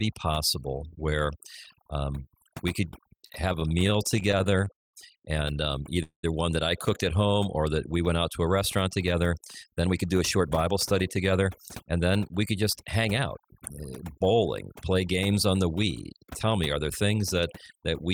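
Speech recording with overdone noise removal throughout: the background drops and breaks up into twinkling specks, with quiet parts of the voice cut along with the noise. From 3.17 to 4.95 s, just after "where um we could", repeated stalls (stutter) occur: 21 brief hangs, the longest 174 ms, adding about 400 ms as the receiver stretched the last sound while waiting for late audio. At 6.03–6.25 s, just before "one that I cooked", a call audio freeze inserts a 204 ms hold, including 90 ms of silence, likely from delayed packets emptying the jitter buffer. From 8.61 to 12.09 s, after "went out to a", a jitter buffer speed-up runs the audio at 108% with unchanged pitch, trimming roughly a third of a second of pitch periods to cut excess delay.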